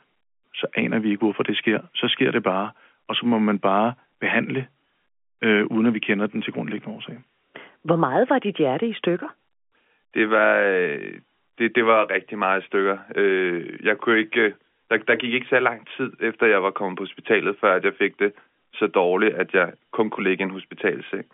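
No faults are audible anywhere in the clip, and the speech sits in a narrow telephone band with nothing above 3.6 kHz, as expected of a 64 kbps A-law line.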